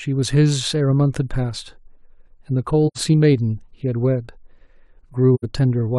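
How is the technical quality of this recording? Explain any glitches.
The recording has two brief gaps in the speech. Both come from AAC frame loss with muting, once from 2.87 to 2.98 s and again from 5.34 to 5.45 s. In each, roughly 85 ms of audio goes silent, which fits two lost frames. The decoder zeroed the missing spectrum, and the overlapping transform windows fade the sound down into the hole and back up out of it. The result is a soft-edged dip. A hard sample dropout would leave abrupt edges, and concealment would fill the gap with smeared or repeated sound.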